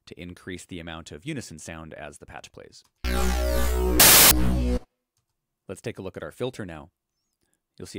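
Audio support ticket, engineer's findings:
Loud harsh broadband noise burst 4.00–4.31 s: samples built from the wrong bytes, decoder misassembling sample bytes. Unlike clipping, no waveform shape survives.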